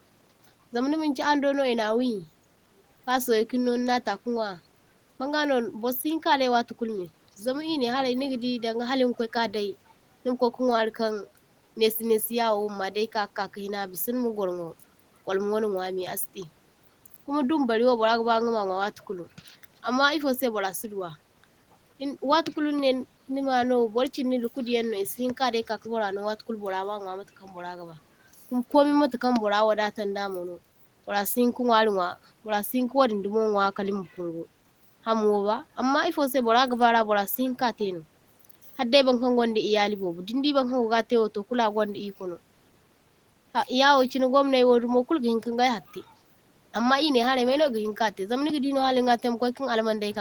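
Nothing in the speech stood out as a technical problem on listening.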